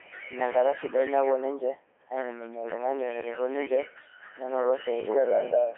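Speech passed through the Codec 2 vocoder for its whole length, and the damage is heavy: the voice comes out robotic and buzzy because the decoder rebuilds it from sine waves driven only by pitch, voicing, energy and a spectral envelope, so the original waveform is gone. The band sits at roughly 300 Hz to 3.4 kHz, and the codec runs in its top 3.2 kbit/s mode. A spectrogram shows harmonic stripes and nothing above 3.6 kHz, and the waveform no longer matches natural speech in shape.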